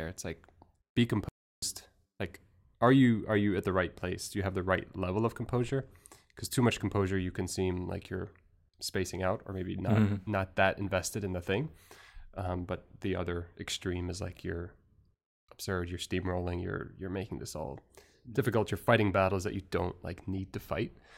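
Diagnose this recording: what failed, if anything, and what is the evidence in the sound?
The speech drops to silence mid-flow from 1.29 s to 1.62 s, a 0.34 s gap, then carries on where it stopped. This is a playback stall at the playback stage, likely the player running out of data or its output thread blocking until it recovered.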